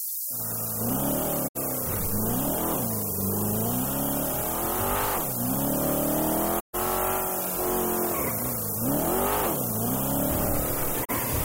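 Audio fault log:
throughout: low bit depth with noise shaping. A steady, thin hiss runs under everything. It climbs sharply toward the top of the band. The coarse steps fit a signal carried on about 4 bits. The rounding error from those few steps is fed back and pushed upward in frequency. That moves the noise out of the lower range and piles it into the treble. The hiss sits at roughly the same level as the sound itself.
1.47–1.57 s, 6.59–6.76 s, 11.04–11.11 s: digital broadcast dropout. The sound fades out over about 20 ms each time, stays silent, then returns. The gaps last about 64 ms, 128 ms and 32 ms. Those lengths fit two, four and one lost frames of 32 ms each. The receiver lost the stream or rejected damaged frames. It muted until good frames arrived again. Whatever was sent during each hole is missing.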